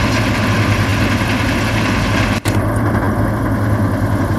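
A repeated buffer causes two brief buzzy stutters at 0.90–0.92 s and 3.05–3.07 s, where a roughly 10.7 ms piece of sound replays twice, which fits a 512-sample buffer.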